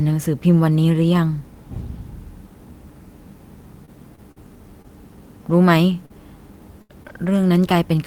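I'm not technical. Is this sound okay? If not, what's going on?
No, not entirely. Scattered short gaps run from about 3.85 s to 7.71 s: around seven tiny dropouts, the longest roughly 70 ms, adding up to about 240 ms of lost sound. Small chunks of the speech went missing or arrived too late in transit. To cover about 100 ms of that, the player stretched the sound just before each hole, so you hear brief ticks, smears or hiccups.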